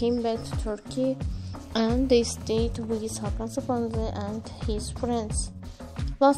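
From 1.60 to 2.57 s, GSM phone buzz: a nearby handset's 217 Hz call bursts, rectified by the audio circuit, give a raspy buzz about 30 dB down, drawn as evenly spaced harmonic lines.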